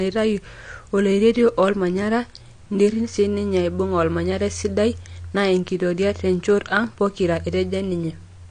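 From start to finish the speech is dull and smeared. Nothing remains above 9.8 kHz. Sibilants and held sounds carry a warbling, fizzy texture. This is likely AAC compression, AAC-LC at a low bitrate near 32 kbps, cutting the top band and thinning what remains.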